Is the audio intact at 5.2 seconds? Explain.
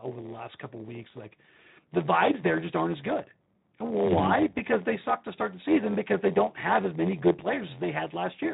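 No. A padded block size mismatch runs throughout, zero-filling each block that fits 512-sample reads, giving an 86.1 Hz buzz and 0.938× speed with the timbre kept.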